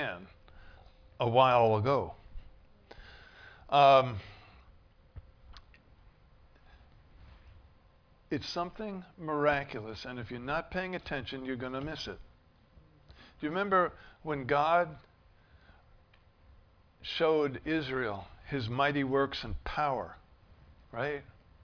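No technical faults can be heard in the audio at any point.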